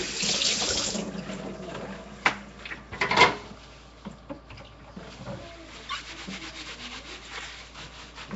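Nellymoser compression runs from start to finish: the sound carries a rough, hissy halo and a smeared, watery blur, with nothing above about 7.7 kHz. The likely cause is the old Flash microphone codec, Nellymoser Asao, which codes short blocks at a fixed bit budget, leaves weak bands with no bits and fills them with noise. The damage is plainly audible, and the thinness points to a rate around 32 kbps.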